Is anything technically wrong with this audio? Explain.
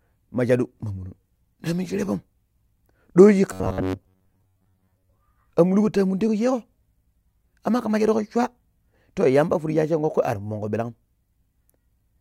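Yes. From 3.53 to 5.18 s the speech has robotic sound from repeated short buffers, a rigid metallic buzz at 93.8 Hz. The likely cause is audio arriving late, with most gaps filled by repeating a chunk of about 10.7 ms. The waveform shows identical repeating cycles, and the spectrogram shows steady, evenly spaced harmonics.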